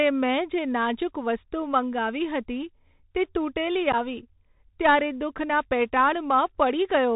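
From start to finish the speech passes through the Bluetooth CVSD headset codec, and the damage is plainly audible. CVSD sends a single up-or-down bit per sample and adapts its step size, which fits a 64 kbps link. Nothing survives above 4 kHz, so a spectrogram shows a flat ceiling there. Loud, bright passages outrun the step and distort, s sounds turn scratchy, and a fine granular hiss sits beneath the speech.

From 3.92 to 3.95 s comes unconcealed Bluetooth headset packet loss. Several short voice packets between headset and phone went missing, about 11 ms of audio in all, and silence or an idle pattern replaced them with no attempt to hide the gap. The result is a brief hole with hard edges that can click, and the speech returns quieter for a moment. On the waveform it appears as an abrupt flat notch, and on the spectrogram as a thin vertical blank stripe.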